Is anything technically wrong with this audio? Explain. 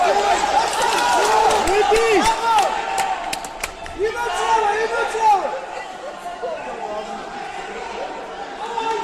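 No, nothing technically wrong can be heard in this audio. No fault of any kind turns up anywhere in it.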